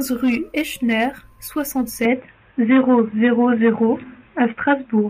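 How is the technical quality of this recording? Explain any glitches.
The recording has one glitch. At 2.05 s the speech turns dull and boxy through to the end, cutting off above 3.8 kHz with no gap. The likely cause is an input switched to a poorer device. The new faint noise about 45 dB down and the roughly 5 dB level shift set it apart from a simple filter.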